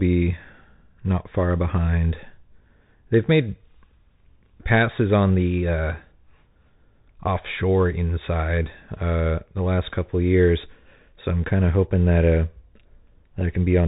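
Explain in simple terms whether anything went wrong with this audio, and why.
Yes: the whole recording went through a Bluetooth CVSD headset codec. Everything above about 3.8 kHz is gone, s sounds turn scratchy, and a grainy hiss sits under the speech. That hiss sets it apart from a simple muffling filter.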